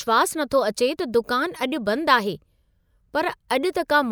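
Nothing stood out as a technical fault on listening to this speech recording.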